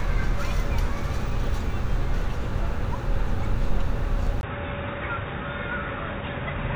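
At 4.41 s the sound drops out for about 20 ms. When it returns, it is duller and boxier. Nothing is heard above 3.8 kHz. The level falls by roughly 10 dB, and a faint new noise floor appears well below the sound. This lasts to the end of the clip. The pattern points to an input switched to a poorer device, likely a second microphone or a headset's narrowband call profile.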